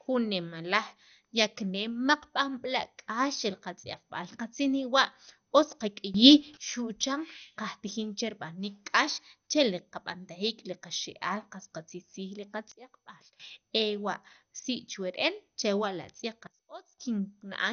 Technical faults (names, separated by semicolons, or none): MP2 compression; sudden gain jump